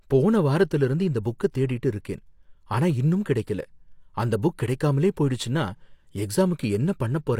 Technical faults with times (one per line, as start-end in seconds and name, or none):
1.23-1.40 pre-echo